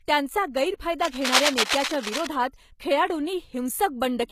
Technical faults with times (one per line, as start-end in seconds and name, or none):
0.00-4.32 HE-AAC compression
0.99-2.27 cable scratch noise